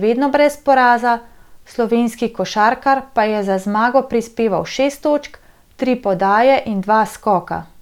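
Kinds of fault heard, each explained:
The speech signal stays continuous and stable throughout, with nothing audible that points to a problem in capture, processing or playback.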